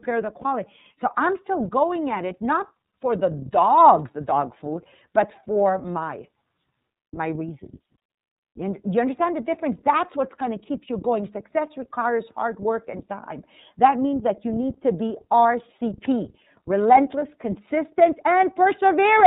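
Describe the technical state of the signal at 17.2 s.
Lost iLBC frames at 17.19 to 17.22 s: a 30 ms stretch of packet data never reached the decoder, which fits a single missing 30 ms frame. The decoder covered the hole by repeating the last pitch cycle and blending it with noise, so for that instant the speech turns into a brief held, faintly buzzy or breathy vowel-like sound. Since each iLBC frame is decoded independently, the speech returns cleanly right after 17.22 s.

The iLBC codec itself is present at this moment and throughout. The audio is narrowband, with nothing above 4 kHz, so the speech sounds dull and telephone-like. Each 30 ms frame's excitation is coded on its own, and at a rate consistent with about 13 kbps the damage is plainly audible: the speech stays clear but carries a rough, slightly synthetic texture.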